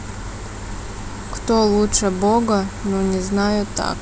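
No technical faults occur at any point in this speech recording.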